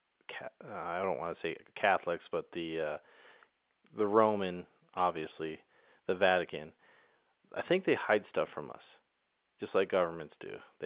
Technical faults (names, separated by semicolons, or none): none